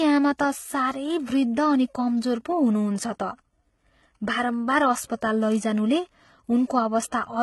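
Transcoding between lossy codecs runs through the whole speech clip. Nothing sounds above 11.8 kHz, and a low-rate HE-AAC smear sits under MP3-style artefacts. This likely comes from audio encoded near 16 kbit/s and then re-encoded around 64 kbit/s MP3, which adds its own damage on top of the first.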